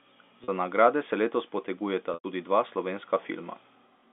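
At 0.44 to 0.48 s, just before "nagrade se", and at 2.14 to 2.24 s, packet loss with pitch repetition bridges each gap with the last pitch period. The 40 ms loss sounds held and buzzy. The 100 ms loss fades to silence before speech cross-fades back.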